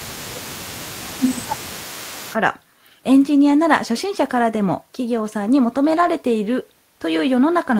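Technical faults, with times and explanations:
0.00–2.37 s, echo leak: a faint delayed copy of the speech, 423 ms behind and about 20 dB down, likely residual loudspeaker pickup the far-end echo canceller failed to remove.
0.02–2.26 s, speech suppressed in double talk: the talker's level dips by up to roughly 15 dB over about two seconds, likely the echo canceller attenuating everything while both sides overlap.
5.97–6.07 s, lost packet rebuilt from error correction: about 60 ms, consistent with three 20 ms packets, plays back rougher and noisier, decoded from low-bitrate redundant copies instead of the originals.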